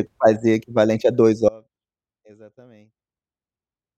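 At 1.49 s the speech drops out abruptly and never returns, leaving only a faint residue, roughly 25 dB down, to the end. This audio dropout to a faint residue likely reflects a signal path that stayed live after losing its source. The hard edge separates it from a fade or a natural pause.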